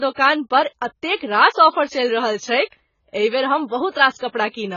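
AAC compression runs throughout the speech, with nothing above 7 kHz and a dull, smeared, warbling texture. Heavy damage like this likely comes from an AAC-LC encoder at a very low bitrate, around 16 kbps, starving its frequency lines and emptying the top band.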